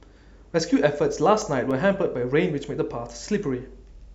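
From 1.13 to 2.00 s, four CD scratch ticks occur at a steady spacing in the speech. A surface blemish corrupts more data than error correction can rebuild on each disc rotation, so the player interpolates or mutes samples, giving brief clicks, the longest about 1.5 ms.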